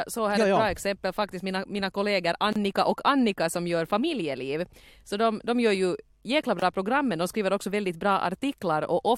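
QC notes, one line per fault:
2.53–2.56 s and 6.59–6.62 s, gap at a join of encoded pieces: silences of 30 ms after "faktiskt mina mina kollegor" and 25 ms before "program men de skriver". Their abrupt edges are smeared, left by encoder start delay and end padding. Unlike a dropout, the speech resumes exactly where it stopped and nothing is missing.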